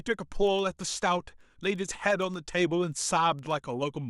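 From 0.12 s to 4.09 s the speech has word clock ticks, a steady run of about forty at roughly ten a second. The receiver is off the sender's clock by a couple of hundred ppm, so every slip drops or repeats one sample.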